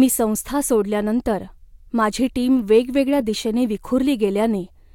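Nothing in this speech recording stood out as a technical fault on listening.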